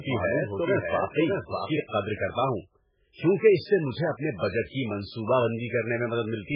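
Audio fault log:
throughout, MP3 compression: Heavy codec damage gives a watery, swirling texture with smeared onsets, and nothing remains above 5.2 kHz. This points to a very low bitrate, around 8 kbps, likely starving the encoder so it discards weak frequency lines frame by frame.
0.0 to 1.8 s, doubled audio track: A second full-band copy of the speech, already running when the clip opens, trails the original by roughly 0.7 s at about 5 dB quieter. It has no decay or room colour and stops abruptly at 1.8 s, likely from a second capture path or an edit leaving two copies out of step.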